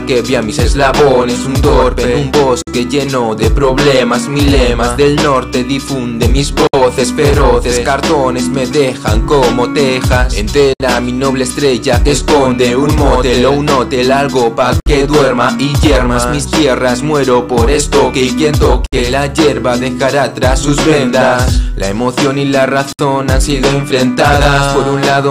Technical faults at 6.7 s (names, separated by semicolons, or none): gap at a join of encoded pieces